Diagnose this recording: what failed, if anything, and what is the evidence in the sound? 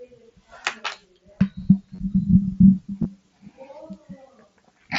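Concealed Bluetooth headset packet loss on the headset-to-phone radio link: at 1.95–1.99 s (30 ms) and 3.03–3.05 s (about 23 ms) the speech turns briefly buzzy and tonal, which fits runs of four and three lost packets. The receiver filled each gap by repeating a matching stretch of recent waveform.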